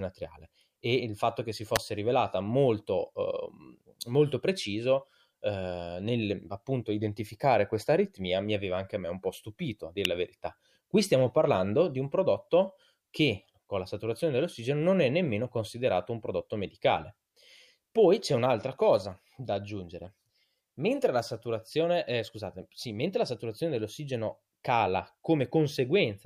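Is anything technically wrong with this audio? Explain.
Yes. Electrical switching spikes occur at 1.76 s and 10.05 s, likely from a nearby switch, motor or static discharge arcing and coupling into the audio line. Each is a sharp snap over the speech, peaking at about -5 dBFS and about -10 dBFS respectively.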